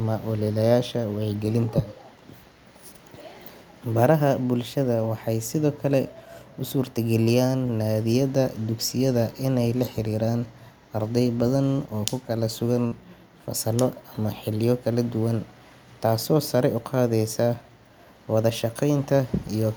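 Speech, with three jitter-buffer and packet-loss faults. At 7.23 to 7.28 s, just before "naadiyada dugsiyada inay la", there is a short stall from a late packet. A packet missed its playout time and the buffer ran dry, so the receiver held the last sound for about 27 ms and then resumed from the same point. Nothing is lost, but the sound is stretched with a faint buzzy hold, and the delay grows by that 27 ms. On a spectrogram the harmonics run flat and unchanging for that stretch. In the waveform the same pitch cycle repeats several times before normal variation returns.

Between 11.67 and 11.95 s, after "la xiriiraan arday badan" and leading into "oo ku", a jitter buffer speed-up compresses the audio. The buffer had built up more delay than it targets, so it cut short pitch-period-length pieces many times in a row, around 40 ms in all. Playback runs at about 112% speed with unchanged pitch, so the phrase sounds rushed. 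A spectrogram shows harmonic spacing unchanged while syllables and formant transitions are squeezed closer together. The waveform shows tightly packed cycles with no visible seams.

At 12.87 to 12.93 s, just before "fasallo ama xilliyo kala", short concealed packet loss replaces 40 ms of audio that never arrived with about 42 ms of synthesized continuation blended back into the real signal. It is heard as a brief smear or wobble. On a spectrogram the harmonics extend smoothly, then fade or turn noise-like before the true signal resumes. The waveform shows a small envelope dip around the crossfade.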